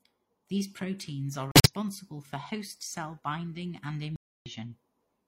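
Speech with two abrupt dropouts of the corrupt frame muted kind. Between 1.51 and 1.71 s, after "proteins are" and before "for host cell binding", the signal cuts to silence for about 0.19 s. At 4.16 to 4.51 s, after "host cell binding and", a longer 0.35 s hole follows. Damaged compressed frames were rejected by the decoder and replaced with silence, so timing stays intact. The gap lengths fit runs of roughly four and eight codec frames.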